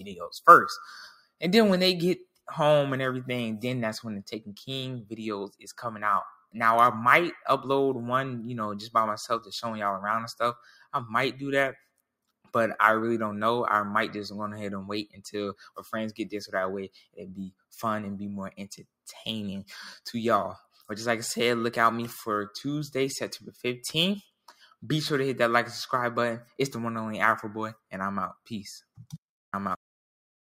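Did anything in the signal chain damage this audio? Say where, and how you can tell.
Yes. At the converter stage there is sample clock jitter throughout. A fine hiss-like roughness rides on the sound, sitting roughly 30 dB below it, and it grows on loud, bright passages and disappears in quiet gaps. That level dependence sets it apart from ordinary background noise or a noisy preamp, whose hiss stays constant. The converter's clock wanders by a few microseconds, so each sample is taken off-time and fast-changing waveforms pick up the largest errors.

In call processing, a noise suppressor applied to music or sounds runs through the whole clip. It treats steady tones, ambience and decaying tails as noise, so the level pumps and flutters by a few dB while attacks pass mostly intact. Unlike a compressor, which reacts to loudness, this gain follows how steady or noise-like the material is. Sustained parts thin out even when they are quiet.

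The same suppressor also makes deeper cuts to specific sounds, which is sound cut by the noise suppressor. These happen at 1.11–2.48 s, 5.04–6.55 s, 10.55–12.54 s, 15.06–15.82 s, 16.89–19.07 s, 20.59–20.89 s, 23.51–24.83 s and 27.74–29.17 s. Within each span, parts of the sound sink by about 17 to 21 dB, and decays are chopped short. These cuts are not dropouts, because the audio never goes fully silent and onsets survive.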